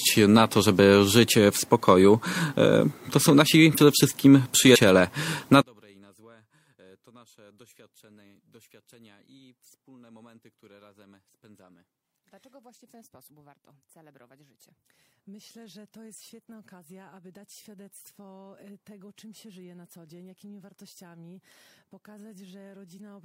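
Compressed frames are skipped at 3.69 and 4.72 s, jumping ahead roughly 40 and 100 ms, with a small vertical seam on the spectrogram. From 5.62 s to the end the mono level drops by about 36 dB, leaving a faint residue and a collapsed waveform, likely because one channel is inverted and cancels on summing.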